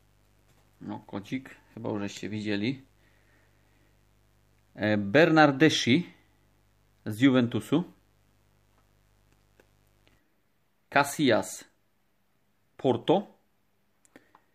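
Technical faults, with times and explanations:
0.00 to 10.19 s, mains buzz: a steady, raspy buzz sits well beneath the sound, roughly 40 dB down, then stops at 10.19 s. Its edge comes from sharp switching spikes at twice the 50 Hz mains rate, so energy spreads across many harmonics of 50 Hz up to several kHz rather than staying a low hum. That points to interference from a dimmer, a rectifier or a missing shield leaking into the signal path.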